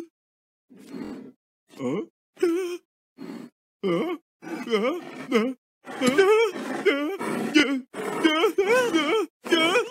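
Bluetooth stutter at 1.05–1.13 s and 7.60–7.64 s: lost packets made the receiver repeat its last buffer, a brief machine-gun buzz in the first and a single repeated slice in the second, then the sound resumes 70 ms and 23 ms further on.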